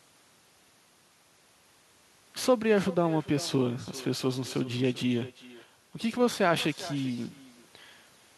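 Echo with no canceller runs throughout: the far-end loudspeaker feeds back into its microphone, returning a thinner copy of the speech around 400 ms later, about 18 dB down.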